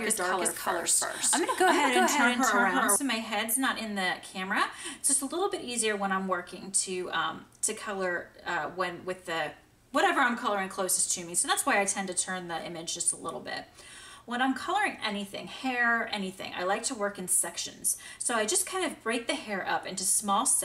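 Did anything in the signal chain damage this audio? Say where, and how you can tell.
Yes. A doubled audio track runs until 2.96 s. A similar-level copy trails about 400 ms behind, then stops abruptly, likely from a slower second capture path at the driver stage.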